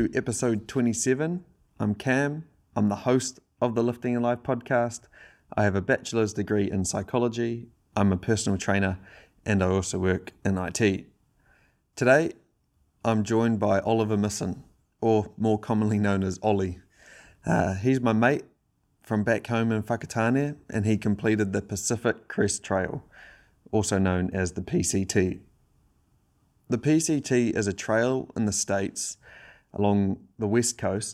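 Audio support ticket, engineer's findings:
No audible faults found in this speech recording.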